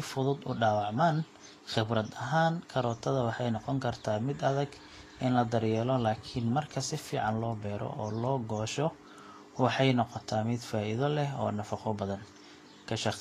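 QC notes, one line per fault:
Throughout: likely Vorbis compression; treble sounds grainy and hissy with nothing above 14.2 kHz, as coarse quantisation at roughly 34 kbps swaps detail for noise.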